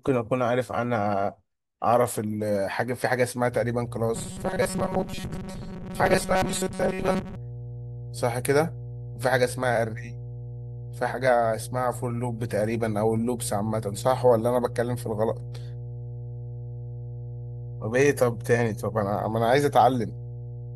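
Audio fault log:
3.52–20.75 s, mains hum: a steady 60 Hz tone starts and continues to the end, about 10 dB below the speech, picked up from the power line through a ground loop or nearby transformer. A spectrogram shows an unbroken horizontal line at 60 Hz.
4.15–7.36 s, robotic sound from repeated short buffers: the speech becomes a rigid, metallic buzz at 188 Hz. The likely cause is starved audio padded by looping chunks of about 5.3 ms that replace most of the real signal. A spectrogram shows evenly spaced stripes at multiples of 188 Hz, and the waveform shows identical repeating cycles.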